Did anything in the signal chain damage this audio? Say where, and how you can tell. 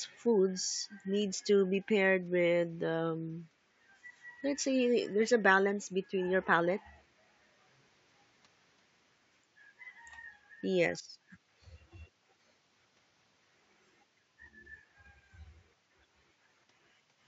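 No signal-chain damage found.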